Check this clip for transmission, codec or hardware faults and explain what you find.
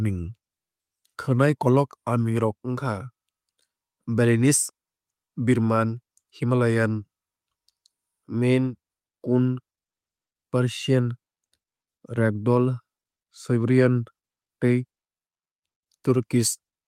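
No transmission, codec or hardware fault can be heard anywhere in this speech recording; the signal stays continuous and stable throughout.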